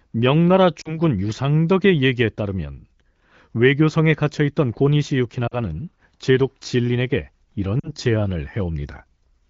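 At 0.81–0.98, 5.47–5.55 and 7.79–7.91 s, lost AMR speech frames (about 40 ms each, fitting two frames) make the speech briefly dip toward near silence. The decoder repeats the last pitch and spectral shape at falling gain, leaving smeared harmonics and a sagging waveform envelope.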